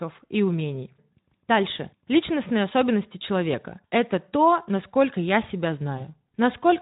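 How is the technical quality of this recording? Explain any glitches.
One glitch stands out in the speech, which comes through a lightly coloured Speex codec path. From 5.97 to 6.08 s, just after "то насколько я себя", the sound briefly smears into a stretched, weakened sound before recovering. This is VoIP packet loss concealed by the speech codec. A gap of about 20 ms, which fits a single lost frame, was filled by stretching the previous pitch and filter. Because each frame builds on the last, the decoder needed about a tenth of a second to regain clean output.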